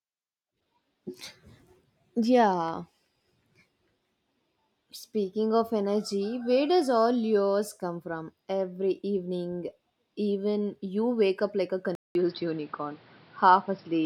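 A speech recording where things go dull at 11.95 s: after a short gap of about 0.2 s, the sound loses everything above 5.6 kHz, shifts in level by about 5 dB and picks up fresh background noise about 30 dB down, until the end. That's likely the input switched to a poorer device.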